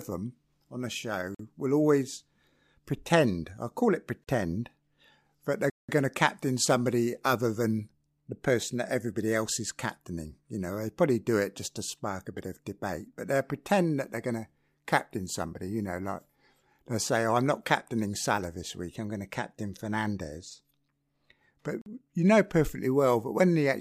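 Speech breaks into a block of digital silence at 1.35 s (46 ms, after "them on a"), 4.24 s (34 ms), 5.70 s (186 ms, after "that they're") and 21.82 s (46 ms, before "you know perfectly"). Unfilled output buffers, fitting 2048- and 8192-sample blocks, leave plain silence with abrupt edges rather than a faded or noisy dropout.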